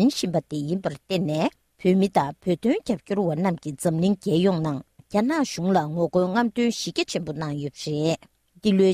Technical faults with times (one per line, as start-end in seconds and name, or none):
none